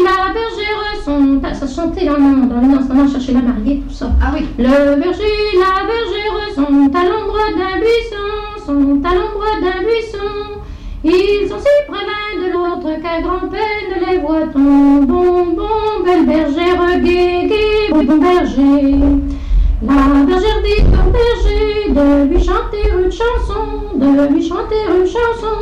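A harsh fuzz rides on every loud moment of the audio from start to finish. This is hard clipping: the signal is driven about 12 dB past what the chain can pass, so a small but steady share of samples has its peaks sheared flat, spraying harmonics high into the spectrum. Twice the sound briefly turns into a garbled flutter, from 12.55 to 12.75 s and from 17.91 to 18.11 s. These are frames out of order: in each stretch two adjacent runs of about 92.9 ms swapped places and were decoded that way, which fits blocks of four frames each. The halves play in swapped order, but no time is lost.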